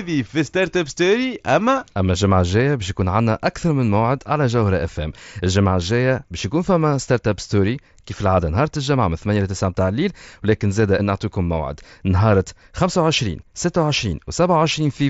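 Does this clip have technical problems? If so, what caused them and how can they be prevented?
No, this clip has no technical problems, so there is nothing to prevent.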